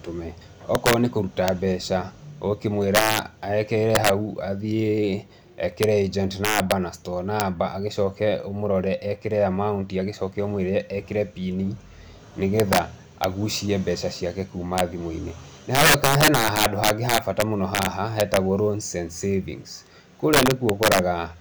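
Integer overflow runs through the whole speech clip. The signal is driven about 7 dB past what the integer format can hold, and instead of being limited at full scale, every peak that crosses the top wraps around to the opposite extreme. Only a small fraction of samples, roughly half a percent, go over. Each one snaps across the full range, so the loudest syllables carry violent, sharp cracks far harsher than ordinary clipping.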